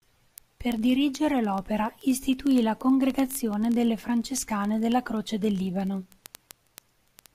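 From 0.11 s to the end, word clock ticks recur roughly every 20 ms, sharp and uneven. An unlocked receiver clock, off by around 0.1%, drops or repeats single samples.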